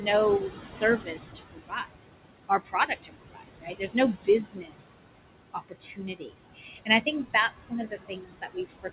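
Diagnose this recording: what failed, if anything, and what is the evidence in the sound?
Noise suppressor artifacts run through the whole recording, which points to the call-processing stage. Between phrases the room noise is pulled down by about 21 dB, then comes back up under the speech. That noise sits only about 9 dB below the speech, so the suppressor works hard, frame by frame, on every band it judges to be steady noise. The speech sits in a band that stops at 4 kHz, which fits a narrowband G.711-type call.

Speech cut by the noise suppressor, also in call processing, occurs at 0.8–1.94 s, 2.49–3.95 s, 4.14–5.09 s, 5.53–6.32 s, 6.55–7.07 s and from 7.34 s to the end. In the first five spans roughly 0.5, 0.7, 0.7, 0.5 and 0.3 s of the speech is swallowed, dropping by about 20 dB, and by about 15 dB around 6.6–7.1 s. The suppressor's noise estimate caught soft, low-level speech energy that resembles the background, and turned it down along with the noise.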